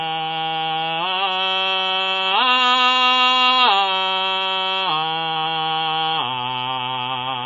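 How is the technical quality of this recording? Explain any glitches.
Technical quality is poor: the music carries plainly audible MP3 compression for its whole length. Nothing is present above about 7.1 kHz, a hard treble ceiling of the kind a starved encoder imposes, and the remaining top end has a watery, swirling texture as weak frequency components flicker in and out between frames. Metallic chirping rides on bright, noisy content and attacks sound smeared. The damage most likely comes from MP3 encoding at a very low bitrate, which fits something around 23 kbps.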